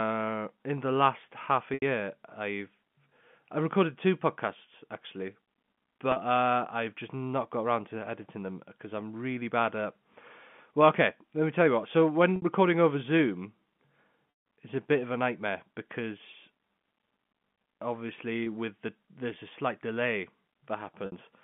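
Packet loss with pitch repetition breaks the speech at 1.74 s (80 ms), 6.12 s (40 ms), 12.36 s (60 ms), 14.30 to 14.46 s (160 ms), 18.44 s (20 ms) and 21.06 s (60 ms). Each time, lost packets are replaced by a repeated pitch period, so short gaps sound like a held buzz. On a spectrogram these gaps appear as frozen, evenly spaced harmonics within the 4 kHz telephone band. The 160 ms gap fades toward silence, showing as a tapering waveform envelope.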